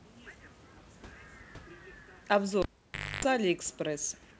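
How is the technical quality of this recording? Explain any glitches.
The recording has one clear glitch, a cable pulled and plugged in, from 2.62 to 3.25 s. The band stops at 8 kHz, which fits a wideband call codec such as G.722. Room noise sits about 31 dB below the speech.

At 2.62 s a live cable is yanked out, giving a pop. The signal drops to near silence for about 0.57 s. As the plug goes back, only the tip touches first, so a 50 Hz mains buzz breaks through for about 0.28 s. A second pop follows as the speech returns at 3.25 s.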